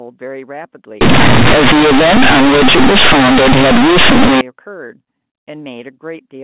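Companded audio read as linear from 1.01 to 4.41 s: mu-law bytes played as plain 8-bit samples, causing very loud, buzzy distortion with heavy noise in pauses.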